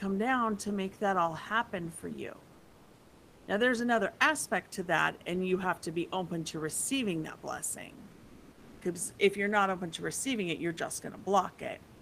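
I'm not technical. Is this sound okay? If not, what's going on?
No. Comfort noise in place of the background appears from 2.53 to 3.47 s, after "all happen for you", and from 8.11 to 8.81 s, after "to receiving that blessing". In those pauses, the real room hiss turns into a smooth, lifeless hiss. The likely cause is the sending side going quiet between phrases, with the receiving side filling in artificial noise.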